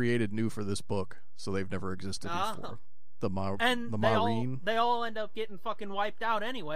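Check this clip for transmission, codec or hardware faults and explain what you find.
One fault is present: a DC offset running through the entire speech clip. The waveform sits on a constant shift of about -32 dBFS away from zero. That shift comes from a steady voltage or bias added somewhere in the chain, such as a converter stage. You cannot hear it as a tone. It appears as fixed energy at 0 Hz. It also eats some headroom, so peaks on one side reach full scale sooner.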